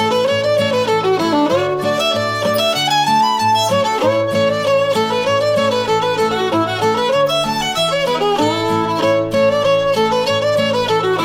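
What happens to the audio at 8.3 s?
Nothing goes wrong at 8.3 s; the audio plays through that moment intact, with no dropout, click or other fault.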